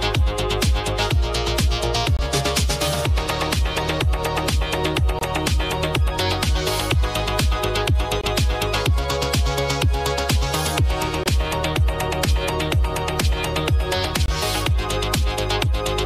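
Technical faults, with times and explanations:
2.17, 5.19, 8.21, 11.24 and 14.26 s: gap between chunks. The audio seems to arrive in 3-second blocks, and each join leaves a silent hole of about 23 ms before the next block starts. Nothing is missing; the sound just stops and restarts. The hard edges make each hole a clean, abrupt dropout, and the steady 3-second spacing gives it a regular rhythm. That pattern fits padding or a late start at each chunk boundary.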